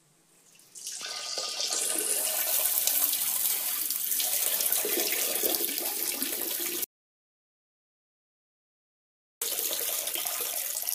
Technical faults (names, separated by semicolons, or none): audio dropout to silence